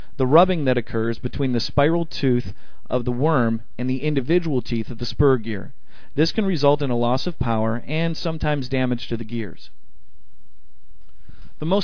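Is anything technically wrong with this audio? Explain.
No, nothing is technically wrong with this audio.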